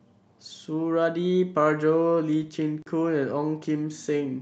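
At 2.82 s there's a block of digital silence about 40 ms long: the output dropped to zeros and back with no fade, so you hear a short hole.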